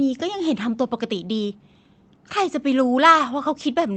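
No faults; the speech carries the ordinary signature of a WebRTC call path, with the top end stopping near 8 kHz, consistent with Opus at a modest bitrate of roughly 24 kbps.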